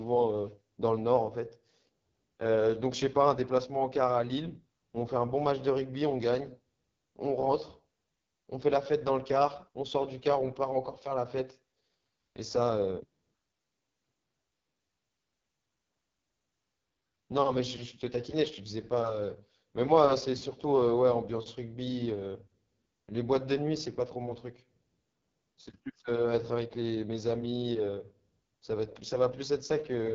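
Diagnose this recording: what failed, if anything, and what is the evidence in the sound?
The codec stage failed. This is the AMR wideband (HD Voice) codec at work, heavily damaged for the whole clip. The speech sounds rough and raspy throughout. Nothing is present above 7.5 kHz. That fits the wideband coder's ceiling. The grain points to the lowest rate, about 6.6 kbit/s. At that rate the pulse-driven vocal tract model has too few bits for the excitation. Voiced sounds come out rough and coarse.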